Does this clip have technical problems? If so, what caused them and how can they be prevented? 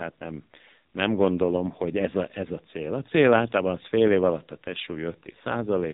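Yes. AMR narrowband mobile codec damage runs throughout: nothing passes above 3.8 kHz, and heavy buzzy, synthetic coloration fits a very low AMR-NB rate near 6 kbps. Prevent it by recording or transmitting over a wideband or higher-bitrate path instead of a narrowband mobile call.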